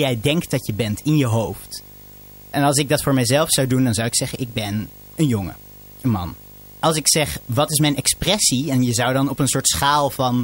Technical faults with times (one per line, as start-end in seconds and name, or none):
0.00-10.44 video or display buzz